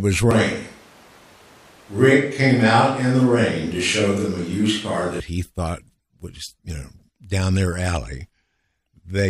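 From 0.31 s to 5.2 s the speech turns roomy and hollow, with thinner bass and a room noise floor about 30 dB below the speech, while the level stays roughly the same. It returns abruptly, pointing likely to a switch to a distant microphone.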